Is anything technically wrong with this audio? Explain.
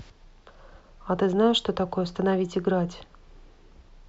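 No, the speech signal comes through intact, with nothing technically wrong to be heard at any point.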